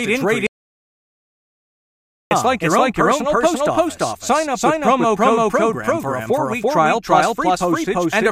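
A second, out-of-step copy of the speech is likely being captured by a slower path or held by an edit, so a doubled audio track runs through the whole clip. An echo at roughly the same level trails about 300 ms behind, full-band and dry, with no decay or room colour.

From 0.47 s to 2.31 s the input was likely lost, perhaps through a dropped link or stray mute, while recording continued with silence. This audio dropout to silence cuts the speech off abruptly, leaves about 1.84 s of total silence without room tone, and loses whatever was said.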